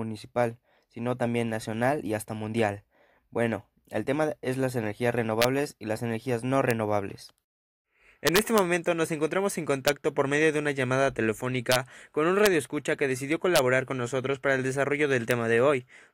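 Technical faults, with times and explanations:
5.42–5.44, 6.71, 8.27–8.59, 9.88, 11.72–11.76, 12.46, 13.56–13.59 (just after "que decidió") and 15.31 s, integer overflow: loud peaks going only about 0 to 2 dB past full scale wrap to the opposite sign instead of being held at the limit. Each one swings across the whole range, so you hear harsh cracks that are much sharper than ordinary clipping.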